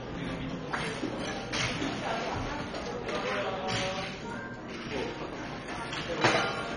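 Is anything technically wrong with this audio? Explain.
Yes. MP2 compression throughout: the sound is dull, nothing above 10.4 kHz, with gurgling, granular distortion, likely from Layer II coding at a bitrate as low as 32 kbps, starving upper sub-bands.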